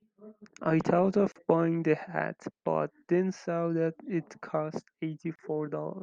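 At 1.32 s the speech drops out into a short silence of about 36 ms, ending at 1.36 s. It comes back exactly where it stopped, so nothing is missing. This is a gap at a join of encoded pieces: the audio was encoded in segments about 4.0 s long and joined without trimming. Each segment's encoder start-up delay and its padded final frame were left in place. The same fault returns at 5.36 s, lasting about 32 ms. Both gaps have their edges smeared by the codec, so the truly silent part is shorter.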